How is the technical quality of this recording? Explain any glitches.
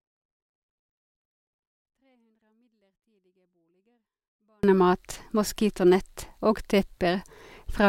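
The recording has one clear fault, a 24-bit alignment error that leaves the opening far too quiet. From the start to 4.63 s the speech is clean but sits about 48 dB below its proper level, close to inaudible. Samples held in the low 24 bits of 32-bit words were read as full 32-bit integers, so every value lost its top eight bits of scale. The level then returns to normal.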